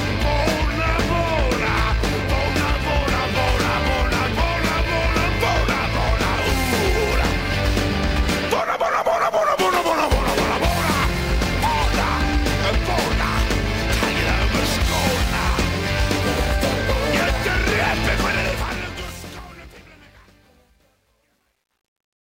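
From 18.32 s to the end at 22.28 s, the fade-out carries truncation distortion. The fade keeps only about 10 bits and adds no dither, so as the level drops the waveform collapses into coarse steps. From 19.58 s onward the tail turns gritty. Unlike a gate chattering, this grit follows the falling level, not a threshold.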